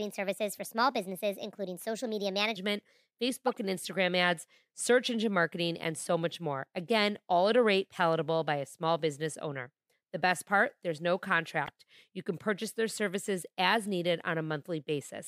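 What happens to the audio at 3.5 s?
From 3.47 to 3.55 s the speech is broken by a corrupt frame decoded: damaged bits in the compressed stream were decoded as if valid, so wrong gains and misread codes place energy at the wrong frequencies. The result is a short chirp, squeak, blip or burst of noise, about the length of a few frames. On a spectrogram it shows as a brief vertical block of misplaced energy.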